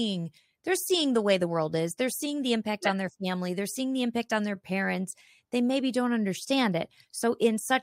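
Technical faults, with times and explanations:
0.89 s, block of digital silence: a 5 ms hole just before "the way the world". Abrupt, unfaded edges make it a tick, unlike a softened dropout.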